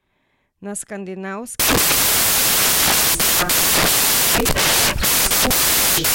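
Samples built from the wrong bytes take over at 1.6 s and last to the end of the speech. From that point the reader assembles each sample from misaligned or swapped bytes, so the rapidly fluctuating low-order bits land in the most significant position and set the amplitude. The result is loud, harsh broadband noise, close to white on the louder sounds.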